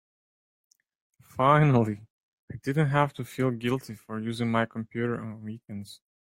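No technical faults can be heard in this speech recording. Nothing in the audio points to a problem anywhere along the signal path.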